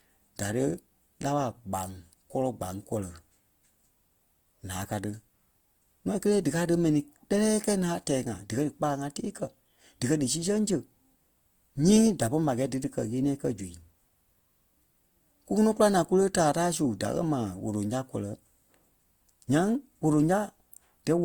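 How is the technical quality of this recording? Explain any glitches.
The speech carries plainly audible Opus compression for its whole length. Tones sound grainy, rough and noisy rather than swirly, while the bandwidth stays full up to about 20.1 kHz. This is likely a low-rate Opus encode in its music (CELT) mode, consistent with roughly 24 kbps, where starved bands are refilled with folded or noise-like content instead of being left empty.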